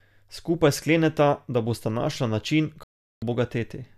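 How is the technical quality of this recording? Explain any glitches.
The recording has one glitch, a digital broadcast dropout. From 2.83 s to 3.22 s, right after "da bosta našla način", the speech cuts or quickly fades to silence for about 0.39 s and then resumes mid-programme. The receiver stopped getting usable frames, either through signal loss or failed checksums, and muted until valid frames arrived again. The gap's length fits roughly 16 lost frames of 24 ms each, and the speech sent during that interval is gone.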